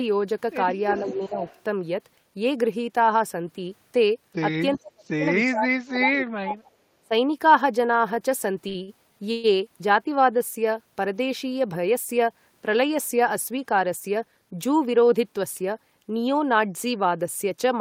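Echo leak at 0.96 to 1.62 s: a faint delayed copy of the speech, about 20 dB below it and trailing by 374 ms, comes back. This is likely a loudspeaker on the far end whose echo canceller let part of its microphone pickup through.

Speech suppressed in double talk from 1.01 to 1.37 s overlaps that echo, dipping the talker by about 10 dB for roughly 200 ms. The likely cause is an echo canceller that could not tell the local talker from loudspeaker echo while both sides spoke, so it turned everything down.

A second, briefer echo leak at 4.74 to 4.79 s returns a scrap about 25 dB down, again 374 ms late.

Further double-talk suppression is much deeper. At 4.78 to 5.25 s the speech drops by about 35 dB for some 400 ms. At 5.46 to 6.71 s it drops by about 30 dB for around a second. At 7.02 to 7.12 s there is a short dip of about 25 dB.

Short stalls from a late packet occur at 8.68 to 8.77 s and 8.83 to 8.90 s. 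Each time the jitter buffer ran dry, and the receiver held the last sound for 62 ms and then 53 ms until the packet arrived. Nothing is lost, but the sound drags briefly with a slight buzz or dip.

A call audio freeze at 9.32 to 9.59 s likely comes from packets held up in transit. The last sound is stretched into a fading buzz or hiss for 121 ms without going silent, and the speech then resumes where it stopped.

Jitter buffer speed-up runs from 13.51 to 14.33 s. The receiver cut roughly 70 ms of surplus buffered audio by removing short pitch-period pieces repeatedly, so the speech runs at 108% speed with unchanged pitch and sounds hurried.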